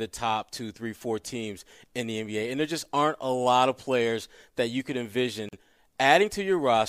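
A short speech clip with one fault: a gap at a join of encoded pieces, running from about 5.49 to 5.53 s. The sound just drops out for roughly 41 ms, with edges smeared by the codec, then picks up exactly where it left off. That points to two separately encoded segments butted together without trimming, so the encoder's start-up delay and last-frame padding ended up as silence at the seam.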